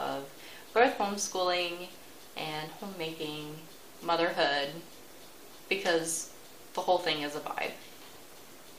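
At 2.68 s and again at 6.82 s there is a brief glitch, each lasting only about 13 to 14 ms, caused by damaged data in the compressed stream. At both points some of the encoded bytes were lost or overwritten, so the decoder misreads the affected frames, loses its place in the bitstream and has to search for the next valid frame header before normal playback resumes. That resynchronisation is heard as a short disturbance.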